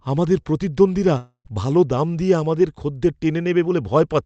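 From 1.17 to 1.47 s speech fades into buzz, then silence, likely a long network dropout; unlike a brief glitch, the lost part never returns.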